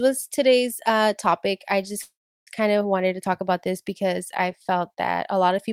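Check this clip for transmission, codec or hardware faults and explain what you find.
There's one fault, a call audio freeze from 2.01 to 2.49 s. The speech stalls into a fading buzz or hiss, then about 350 ms of silence, and resumes exactly where it stopped, nothing lost, just pushed later. Likely a jitter buffer running dry while packets were delayed.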